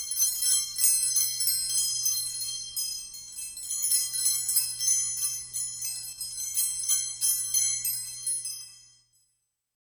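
At 6.13 s the level falls abruptly by about 6 dB for 50 ms, then snaps back at 6.18 s. This is likely one channel dropping out before the mono sum. Unlike a full dropout, the sound continues at lower level with its tone unchanged.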